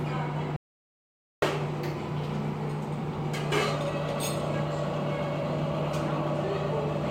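A recording of sounds. There is an audio dropout to silence from 0.56 to 1.42 s. The sound cuts off abruptly and returns mid-flow. The gap is dead silence with no room tone, about 0.86 s lost. The likely cause is a briefly lost input, with silence written in its place.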